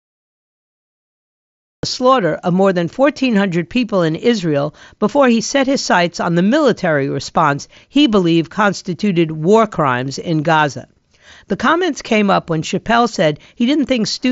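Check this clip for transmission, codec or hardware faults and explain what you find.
One fault is present: a cut-off start. The clip holds digital silence from 0.00 s to 1.83 s, then the audio begins abruptly just before "slaughter of more than". Capture or streaming began late, so the first sound enters mid-stream with no natural attack or fade-in, giving a hard onset and possibly a click at 1.83 s. The band-limiting near 7.7 kHz heard throughout fits the mSBC Bluetooth headset path and is not a fault.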